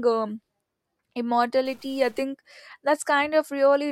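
From 1.65 to 2.23 s grainy noise appears in the speech. A likely stuck bit pushes many samples off by a step of about -50 dBFS.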